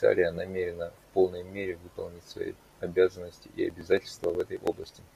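From about 3.70 s, right after "выполнить свои обязанности и", to 5.11 s, the speech breaks into a fast run of ticks: periodic USB or driver dropouts. Roughly every 54 ms something stalls the audio path and around 10 ms gets skipped outright, about thirty times in a row.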